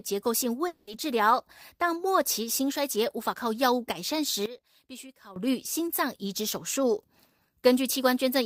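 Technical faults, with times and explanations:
0.67–0.89 s, long network dropout: the speech breaks off and about 200 ms of the last sound is stretched into a buzzy, fading continuation rather than a silent gap. When the audio resumes, roughly 200 ms of speech is simply missing, so the timing jumps ahead. The likely cause is packets not arriving and the receiver concealing the gap. That smeared fill plus skipped material sets it apart from a simple mute or a clean edit.
4.46–5.36 s, one channel inverted: the speech drops by about 18 dB, as if only a faint ghost of the voice remains before it snaps back to full body. The likely cause is one stereo channel flipped in polarity, so the centred voice cancels when the channels are summed to mono.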